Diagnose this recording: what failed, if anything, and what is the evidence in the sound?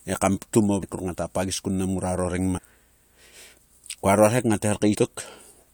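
Compressed frames were skipped at the codec stage, missing or rejected by the decoder, so playback jumps ahead in 21.3 ms steps. At 0.82 s, after "he kam ptum", and 4.94 s, about 150 ms vanishes; at 2.57 s, about half a second.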